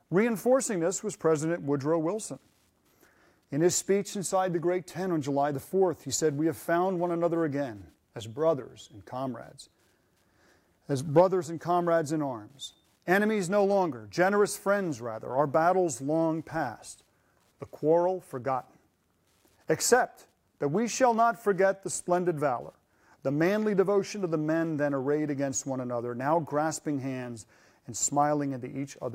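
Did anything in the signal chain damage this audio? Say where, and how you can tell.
Yes, there's Wi-Fi interference getting into the analogue wiring, and it runs through the whole clip. Listen under the sound and you'll hear a faint, steady ticking, roughly 50 dB down, repeating every 102.4 ms, so just under ten ticks a second. That spacing is the giveaway: it's a Wi-Fi beacon interval. A radio sitting near the cabling or preamp is transmitting, and some junction in the analogue path rectifies those RF bursts into audible clicks.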